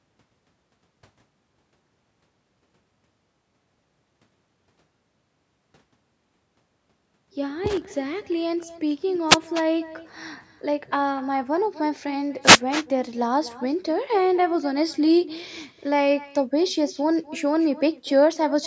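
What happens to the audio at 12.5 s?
At 12.42 s a wireless microphone noise hit breaks in and lasts until 12.61 s. The analogue FM radio link fades as reflected signals cancel each other, so receiver noise rises and is heard as a brief swish of static. On a spectrogram this shows as a broadband smear of noise lasting about 0.19 s and filling the band up to the 8 kHz ceiling of the call processing.

Through the same moment, the echo with no canceller continues as it does across the whole clip. The far end's loudspeaker is picked up by its microphone, and nothing removes it, so each phrase returns about a third of a second later as a thinner copy at about 18 dB below the speech. A spectrogram shows faint duplicated harmonic patterns trailing each syllable.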